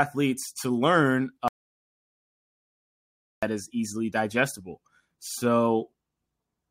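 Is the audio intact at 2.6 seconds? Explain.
No. At 2.6 s there is dead silence, with no room tone, inside a gap from 1.48 to 3.43 s between "to learn" and "is easily digestible", losing 1.95 s of speech. This audio dropout to silence likely came from the input being lost while recording continued.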